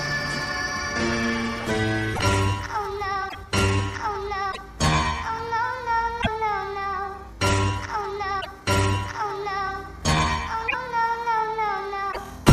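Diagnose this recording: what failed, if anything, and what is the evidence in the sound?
Codec stage, likely a broken MP3 bit reservoir. Short corrupted bursts occur at 2.13, 3.28, 4.51, 6.21, 8.40, 10.67 and 12.11 s, each about 70 ms long, which is under three 26 ms frames. After frames go missing, the following frames borrow bits from the wrong data, so the sound jumps ahead and decodes as garbage.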